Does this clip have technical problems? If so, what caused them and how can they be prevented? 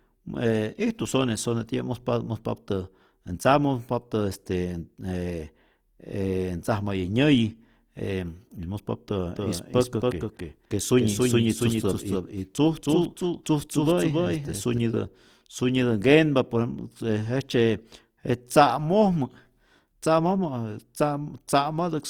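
Yes. Opus compression runs through the whole speech clip. Tones sound grainy and rough, with a noisy texture in the upper bands. It is likely caused by Opus in its music mode at a low rate, around 24 kbps. To prevent it, encode at a higher bitrate or keep an uncompressed master.

A doubled audio track appears from 9.36 s to 14.78 s. A second copy trails about 300 ms behind, roughly 5 dB quieter. It starts and stops abruptly, with no room colour. A second capture path likely caused it. To prevent it, monitor only one input path and mute duplicate routes.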